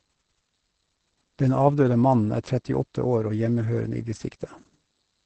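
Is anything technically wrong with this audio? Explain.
Yes, the speech is under heavy Opus voice compression the whole way through. The SILK coder has squeezed it into a wideband channel with nothing above about 8.4 kHz, and the coarse excitation coding, which fits a low bitrate around 10 kbps, leaves it muffled, hoarse and slightly robotic.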